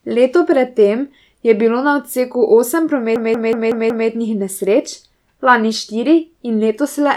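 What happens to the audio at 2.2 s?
Nothing goes wrong at 2.2 s; the speech runs through that moment intact, with no dropout, click or other break.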